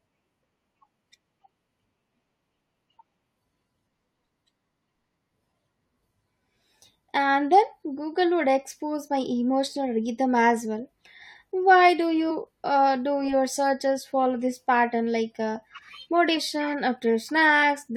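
Speech with compressed frames skipped at 1.96 s, 12.30 s and 16.36 s: the sound jumps ahead by about 70, 100 and 150 ms, multiples of a 23.2 ms frame.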